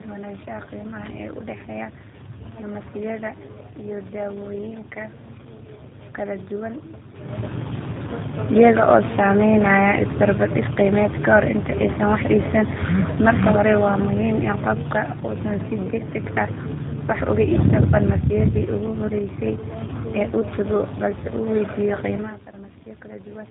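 Tandem speech coding runs throughout the speech: it was decoded and re-encoded by two low-rate speech codecs in turn, which fits GSM full rate followed by G.729A. Each stage degrades the last, so the voice sounds rough, muffled and warbly, with nothing above 3.8 kHz.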